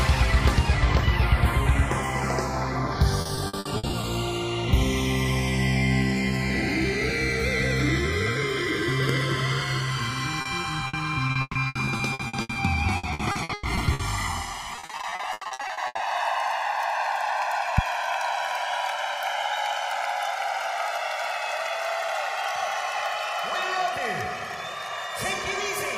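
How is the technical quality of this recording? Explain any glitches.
The recording has clear transport and hardware faults: a slow flanging that runs through the whole clip, several choppy stretches, and two sharp pops.

Channels drifting apart: throughout, the sound has a slow, sweeping flange as its notches glide through the spectrum. The two channels run on separate clocks differing by around 70 parts per million, so the delay between them creeps to about 2 ms. Summed, that sliding offset sweeps the comb filter.

Repeated packet loss (robotic sound): from 3.21 to 4.05 s, 10.41 to 12.57 s, 12.97 to 14.01 s and 14.75 to 16.01 s the audio turns choppy, with pieces missing. Packets kept dropping, each hole patched by stretching the last sound, up to nearly half of some stretches, with gaps as long as 140 ms.

Loud pop: sharp pops land at 9.09 to 9.12 s and 17.78 to 17.81 s, standing about 20 dB and about 15 dB above the sound, which carries on underneath. 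Each is likely a brief voltage spike from a plug, switch, static or driver glitch entering the signal chain.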